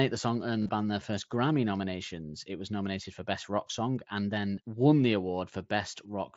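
Concealed Bluetooth headset packet loss hits at 0.63 to 0.69 s, between "the song earned" and "band their first," as a brief buzzy held tone of repeated waveform, longest run about 30 ms. Single 7.5 ms losses at 2.06 s and at 4.56 s, between "and then" and "won the," are nearly hidden. Unlike a dropout, the gaps are filled, not silent.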